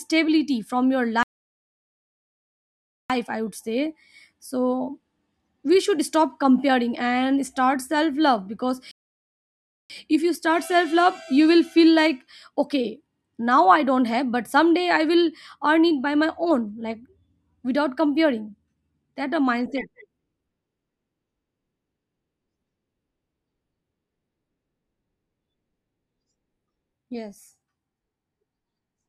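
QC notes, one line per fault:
1.23–3.10 s and 8.91–9.90 s, playback stall: output goes silent after "from your" for 1.9 s and after "love because" for 1.0 s, then picks up at "i would say so" and "if you start self". Unlike a dropout, the silence comes from the player likely running short of data or being blocked, not from lost audio.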